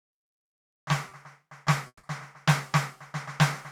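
At 1.09 to 1.13 s, a short concealed packet loss: about 20 ms of the stream arrived too late, so the receiver extended the preceding music, leaving a brief smear. From 1.87 to 2.05 s, a long network dropout likely stalled delivery; a fading continuation of the last sound lasts about 160 ms, then about 50 ms of silence before the music resumes further on.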